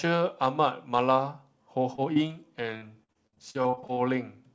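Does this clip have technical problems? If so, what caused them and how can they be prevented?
Yes. The first problem is short concealed packet loss, in three brief spots at 1.96–2.00 s, 2.14–2.18 s and 2.28–2.32 s. In each, about 20 ms of the call never arrived, and the receiver bridged the hole by extending the preceding sound before blending back into the real audio, leaving a quick smear or wobble. These are isolated single patches with clean audio between them, unlike the sustained breakup that follows. A larger jitter buffer and forward error correction or redundancy would help prevent this.

The second problem is repeated packet loss with a robotic sound, from 2.78 to 3.98 s. Twelve gaps arrive in quick succession, the longest about 56 ms, so roughly 29 percent of that stretch is synthesised rather than received. Each patch extends the last sound, and the next loss hits before the audio has recovered, so the speech turns choppy, with pieces missing. 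The density of the gaps distinguishes it from the isolated patches earlier. A more stable network link, with bursty loss reduced through QoS, a wired connection or less congestion, is the way to prevent it.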